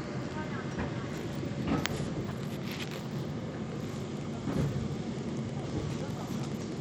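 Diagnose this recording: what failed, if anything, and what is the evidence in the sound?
The codec stage shows damage throughout. The treble is thin and unstable, flickering in and out. A gritty noise rides on the sound, with aliasing hiss. This is likely Bluetooth SBC compression at a small bit pool, which fits a low bitrate near 96 kbps. SBC splits audio into a few wide sub-bands with crude bit allocation. The weak top bands get little or nothing. The rest are quantised coarsely, and that quantisation produces the grit.

From 5.17 s to the end at 6.80 s, a separate fault appears in the analogue wiring: Wi-Fi interference. A steady tick repeats about ten times a second, once every 102.4 ms. The ticks sit roughly 20 dB below the main sound. A nearby Wi-Fi radio's beacon and data bursts are being picked up and rectified by the audio circuit. The circuit turns the radio energy into audible clicks and buzzes.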